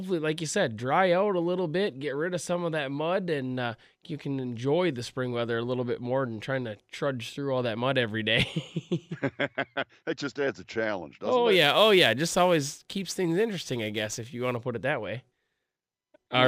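From 11.52 to 14.57 s, just before "to put it that", sample clock jitter of roughly 7 µs adds hiss about 25 dB down, strongest on loud, bright speech.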